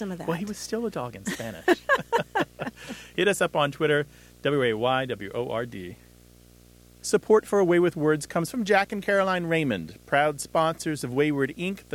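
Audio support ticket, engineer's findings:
Video or display buzz throughout speech, 60 Hz field-rate buzz with fizzy hash above, roughly 30 dB under signal. Probable screen or video cable coupling into audio path. Spectrogram: 60 Hz line plus harmonic comb and broadband haze through gaps; waveform: steady buzz floor in pauses.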